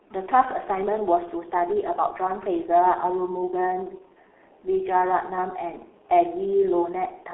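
Throughout, the speech is muffled and hoarse with smeared consonants, cut off above 3.4 kHz. This is heavy G.723.1 codec damage, consistent with a 6.3 kbit/s stream.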